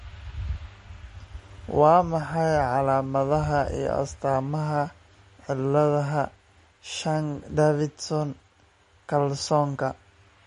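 MP3 compression, likely the cause of the damage heard throughout the clip, from start to finish. When bits are scarce, the encoder drops weaker frequency lines. Those lines then flicker in and out between frames, so the speech takes on a plainly audible watery, swirling texture, with chirpy s sounds and smeared attacks. Nothing remains above 10.6 kHz, leaving the treble cut off flat. The overall degradation fits a bitrate around 40 kbps.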